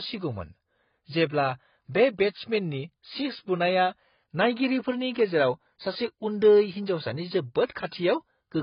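Throughout the speech, heavy AAC compression is the likely cause, fitting AAC-LC at a very low bitrate around 16 kbps. Short of bits, the encoder discards everything above 5.1 kHz, leaving the sound dull and smeared, with a warbling, fizzy edge on sibilants.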